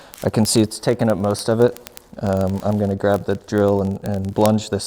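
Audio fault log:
0.12–4.85 s, word clock ticks: the receiver's clock runs about 0.1 percent off the sender's. A sample slips roughly every 20 ms, so the ticks merge into a rattle.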